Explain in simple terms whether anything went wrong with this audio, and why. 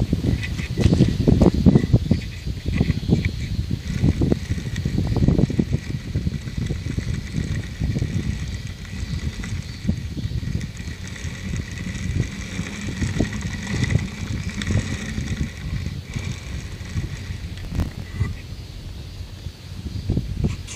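Processor overload crackle, 17.60 to 18.07 s: the computer fell behind, missing dozens of tiny audio chunks in a row and replaying stale snippets, causing gritty tearing.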